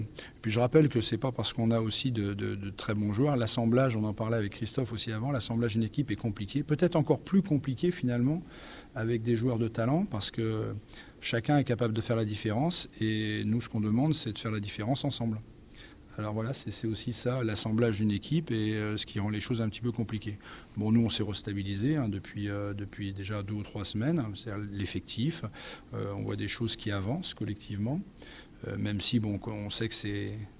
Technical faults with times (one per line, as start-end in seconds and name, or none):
none